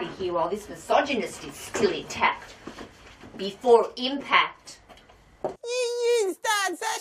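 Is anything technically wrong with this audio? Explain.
No, nothing technically wrong can be heard in this audio.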